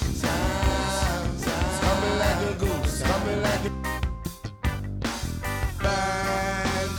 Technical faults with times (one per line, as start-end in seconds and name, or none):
0.00-3.68 doubled audio track